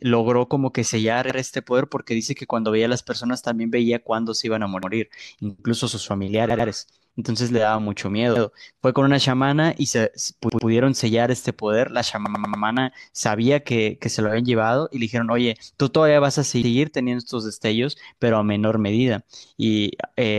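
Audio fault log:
1.3 to 16.7 s, repeated buffer: a 93 ms chunk replays with a hard join, twice at 1.3, 4.83, 8.36 and 16.63 s, three times at 6.5 and 10.5 s, five times at 12.26 s. New audio arrived late, which fits a 4096-sample buffer, so it is heard as a short stutter.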